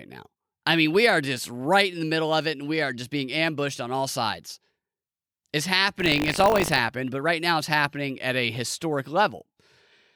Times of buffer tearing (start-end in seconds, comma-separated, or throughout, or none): 5.98-6.79